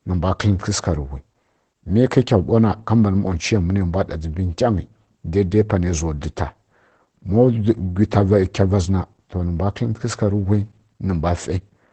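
From start to finish the speech sounds muffled and hoarse, with a slightly robotic edge and nothing above 8.7 kHz. This is Opus voice compression. Its SILK linear-prediction coder, running wideband, codes the excitation coarsely, which fits a bitrate near 12 kbps.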